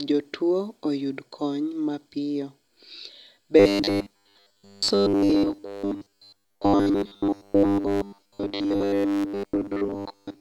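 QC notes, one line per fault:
3.60 to 10.40 s, robotic sound from repeated short buffers: from 3.60 s to the end the speech turns into a stiff metallic buzz locked at 100 Hz that still loosely tracks the syllables. This is likely buffer starvation, with a 10 ms slice replayed in place of most of the missing audio. Unlike ring modulation or codec warble, the pitch stays rigidly fixed at one over the slice length instead of sweeping or gurgling.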